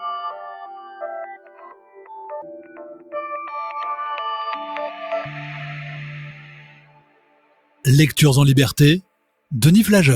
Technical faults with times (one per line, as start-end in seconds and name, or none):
0.00-10.16 noise suppressor applied to music or sounds
0.31-3.14 sound cut by the noise suppressor
6.33-7.84 sound cut by the noise suppressor
9.02-9.51 sound cut by the noise suppressor